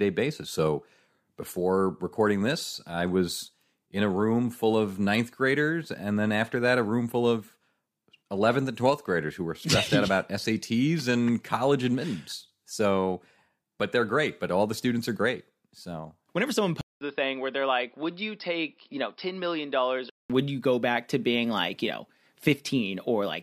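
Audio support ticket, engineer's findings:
Input likely switched to a poorer device, 16.81–20.30 s: 0.2 s gap, then dull, band-limited sound, nothing above 5.3 kHz, about 5 dB quieter.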